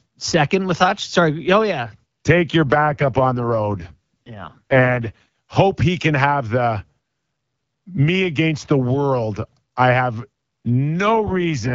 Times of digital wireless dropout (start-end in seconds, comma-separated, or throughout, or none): none